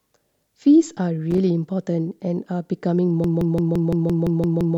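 Speech with two faults. At 1.31 to 1.40 s a burst of loose connector crackle breaks in. A worn contact is making and breaking, chopping the signal into scratchy pops. From 3.24 s to the end, a system hang loop takes over. One 0.17 s slice repeats about nine times, a machine-gun stutter at 5.86 Hz. That fits an 8192-sample ring buffer cycling while the system froze, losing about a second and a half of speech.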